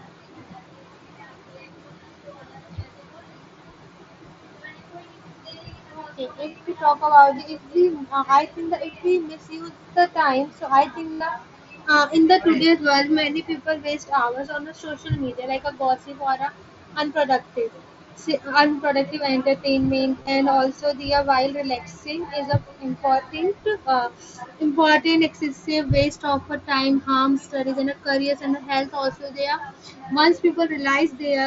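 Concealed Bluetooth headset packet loss at 6.48–6.55 s (before "we talk"), 8.91–8.93 s, 11.13–11.20 s and 20.21–20.27 s. Lost headset packets were patched by repeating recent waveform, giving brief buzzy held tones. The longest, about 75 ms at 11.13 s, ends in a slight warble.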